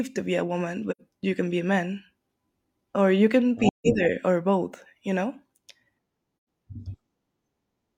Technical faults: AAC frame loss with muting

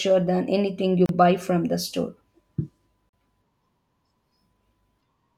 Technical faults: gap at a join of encoded pieces; dropped buffer (overrun)

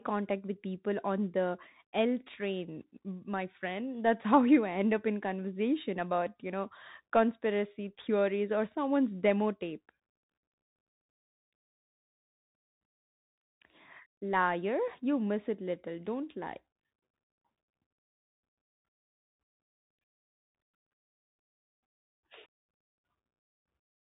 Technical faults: Bluetooth CVSD headset codec

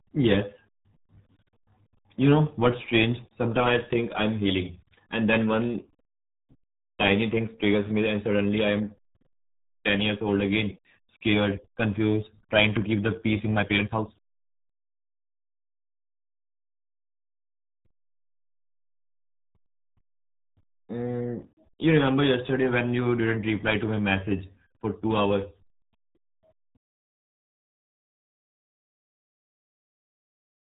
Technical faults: RealAudio 14.4 codec

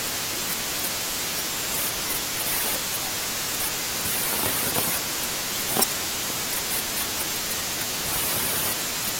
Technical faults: damaged data in a compressed stream

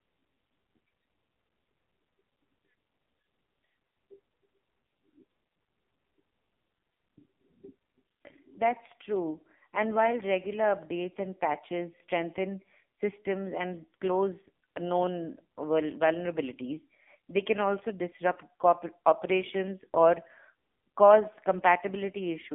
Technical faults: AMR narrowband mobile codec

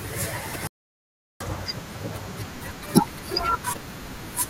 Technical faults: damaged data in a compressed stream; playback stall

